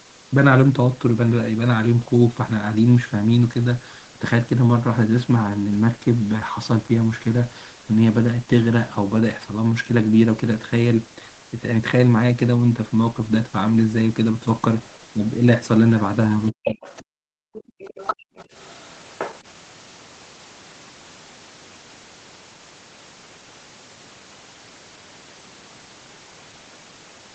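Around 16.47 s a second, fainter voice slips in underneath the talker and hangs around until about 17.04 s, sitting roughly 10 dB below the main speech. That's the other side's voice leaking through, likely because the loudspeaker's output got back into the mic and the echo canceller didn't fully scrub it out. It returns from 17.53 s to 19.38 s, quieter this time at roughly 15 dB down.

Right in that first overlap, from 16.51 s to 16.8 s, the talker's own voice suddenly caves in, dropping by something like 40 dB for about a third of a second. This is speech suppressed in double talk. With both sides speaking at once, the canceller likely couldn't tell the near talker apart from the echo and pulled the whole signal down.

Then the room itself starts blinking out. From 17.08 s to 17.79 s the background sound drops by about 40 dB for roughly 700 ms, and there's a shorter hole of about 200 ms between 18.16 s and 18.37 s. 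That's the background gated by the echo canceller. While far-end audio was playing, the canceller clamped the mic hard, so the ambience vanishes and then pops back when it lets go. All of this sits on top of the usual call-path band limit, where nothing is heard above 8 kHz.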